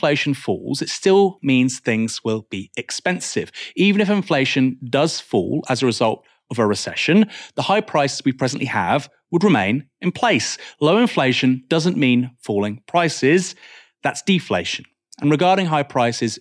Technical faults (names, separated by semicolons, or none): none